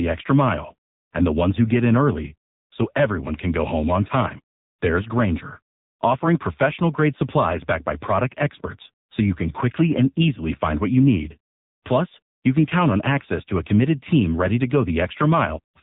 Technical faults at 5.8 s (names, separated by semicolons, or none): AMR narrowband mobile codec